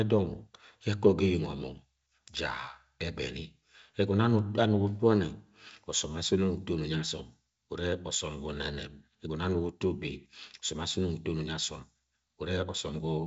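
Nothing stood out on listening to this speech clip, which carries the band-limited sound of G.722 wideband telephone coding with nothing above about 7.7 kHz.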